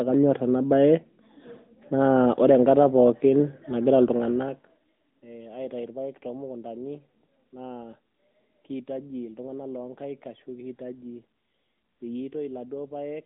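From start to finish the speech sounds thin and boxed-in, with a buzzy, synthetic edge on the voice and no air or sibilant sparkle, since nothing above 3.8 kHz survives and the band runs only from about 200 Hz to 3.7 kHz. This is the AMR narrowband mobile codec: the voice is rebuilt from a vocal-tract model excited by sparse pulses, and the plainly audible coarseness fits one of its higher modes, around 10 kbps.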